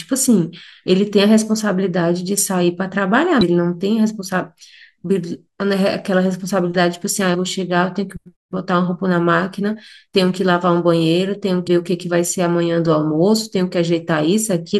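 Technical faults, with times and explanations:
3.41 s, 7.34 s and 11.67 s: damaged data in a compressed stream. Each event is a very short chirp or blip of about 16 ms cutting across the speech. At these points the compressed data has been corrupted, so the decoder cannot read the frame properly. It loses its place and has to find the start of the next intact frame. For that brief moment it outputs garbled audio instead of the original speech.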